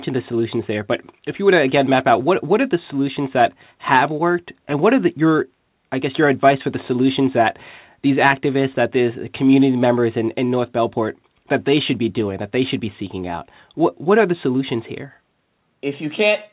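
Nothing stood out as a fault on listening to this speech recording.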